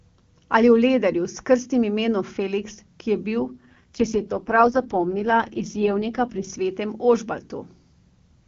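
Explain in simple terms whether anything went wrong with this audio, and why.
An AMR rate drop runs from 3.40 to 6.50 s, just after "ki je". The weak phone link forced the HD Voice codec onto far fewer bits, so the speech turns rough and robotic. Unlike a dropout, nothing cuts out and the sound stays just as full.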